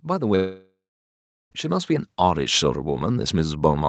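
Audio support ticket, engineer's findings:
Automatic gain rising, 0.05 s to end: speech and background swell together steadily, AGC raising gain after judging input too quiet; band stops near 8 kHz from the call path.

Long network dropout, 0.35 to 1.53 s: fading buzz or hiss continuing last sound, then about 0.75 s silence; audio resumes with roughly 1.16 s lost, likely a jitter-buffer starvation from missing packets.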